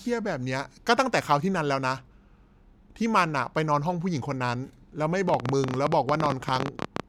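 A train of clicks runs from 5.29 to 7.01 s in this speech clip: around thirty sharp, similar pulses at about 16.4 per second, unevenly spaced and standing well above the speech, likely from electrical interference or a faulty connection.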